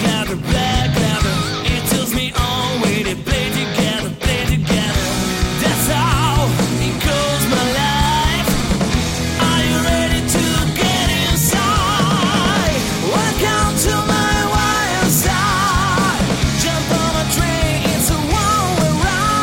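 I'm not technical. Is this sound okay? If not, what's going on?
Yes, it sounds fine: nothing stood out as a problem when listening.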